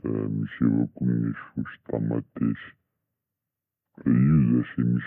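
The speech sounds slow and heavy throughout, about a third slower and roughly seven semitones lower in pitch. This is a wrong sample rate: the samples play back at two-thirds of their recorded rate without conversion, which fits 48 kHz audio played at 32 kHz.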